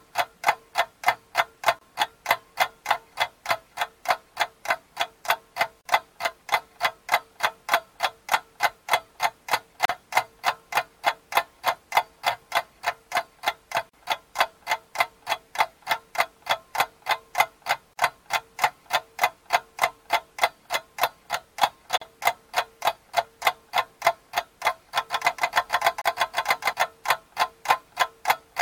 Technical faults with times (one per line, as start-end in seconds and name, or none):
1.79-1.81 gap at a join of encoded pieces
5.81-5.85 gap at a join of encoded pieces
9.85-9.89 gap at a join of encoded pieces
13.89-13.93 gap at a join of encoded pieces
17.93-17.97 gap at a join of encoded pieces
21.97-22.01 gap at a join of encoded pieces
25.09-26.73 doubled audio track
26.01-26.05 gap at a join of encoded pieces